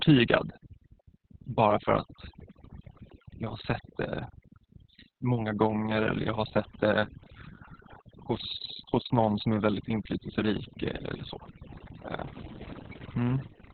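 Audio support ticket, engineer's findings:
Overdone noise removal, throughout: noise suppressor set too aggressive, gating bands near its noise estimate. Background drops out into twinkling, warbling specks; quieter parts of speech are cut away with it.

Opus voice compression, throughout: SILK narrowband coding, heavy damage, fits roughly 6 kbps with 60 ms frames. Nothing above 4.3 kHz; speech muffled, hoarse and robotic from coarse excitation coding.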